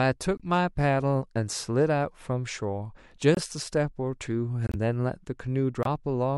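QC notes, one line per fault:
0.37–0.42 s, 3.35–3.40 s, 4.67–4.75 s and 5.83–5.87 s: corrupt frame muted. The speech drops abruptly into silence four times, for 44, 56, 82 and 44 ms. Damaged bits made the decoder reject those compressed frames, and the player filled the gaps with silence. Each hole fits two or three lost codec frames. The speech resumes on schedule afterward, because the muted frames keep their place in time.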